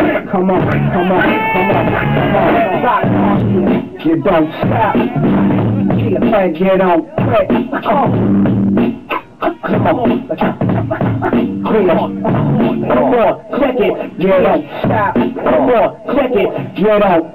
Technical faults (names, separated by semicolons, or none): DC step